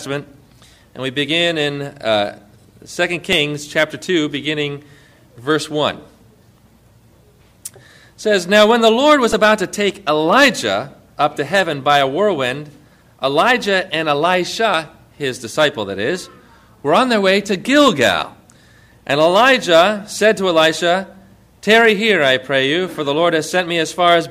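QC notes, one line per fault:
3.33 s, repeated buffer: a tiny chunk of about 1.45 ms, which fits a 64-sample buffer, plays one extra time when fresh audio arrived late, so you get a quick click.
9.33 s, repeated buffer: the same size chunk loops four extra times, losing around 5 ms, so the hard joins stack into a brief buzz.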